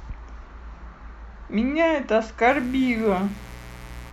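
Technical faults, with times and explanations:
2.47–4.13 s: mains buzz, a raspy 60 Hz buzz some 20 dB below the speech, from sharp switching spikes whose harmonics reach kilohertz, unlike a smooth, low hum.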